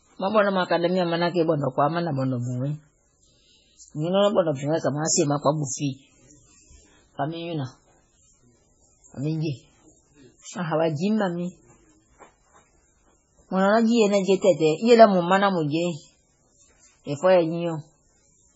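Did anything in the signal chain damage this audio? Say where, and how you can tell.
Yes, at the codec stage. Throughout, the speech stops dead at 7.7 kHz and sounds watery and swirling, likely heavy MP3 compression near 16 kbps. A plain low-pass filter wouldn't flicker from frame to frame like this.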